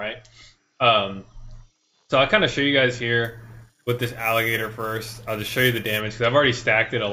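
From 3.25 to 6.00 s, imaging from sample-and-hold upsampling adds a metallic fizz at about -16 dB between 8 kHz and 16 kHz, which points to held samples from a 16 kHz rate. Unlike hiss, it tracks the sound's level and moves opposite to pitch.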